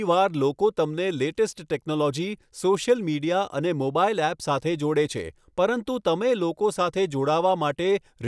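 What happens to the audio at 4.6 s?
Nothing goes wrong at 4.6 s: the speech runs on intact through that moment, with no dropout, click, distortion or other fault.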